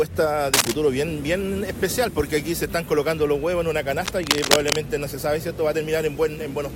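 Cable scratch noise appears from 0.54 to 0.74 s, a short burst of dense, ragged crackle that rises somewhat above the sound itself, and again from 4.06 to 4.76 s, a longer rustling stretch at roughly the same level as the audio. The likely cause is a worn cable, plug or control being moved, its contact resistance jumping erratically and injecting uneven noise bursts that scratch across the signal while the movement lasts.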